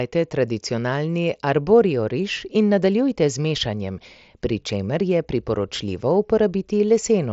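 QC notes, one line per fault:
Nothing stood out on listening to this speech clip.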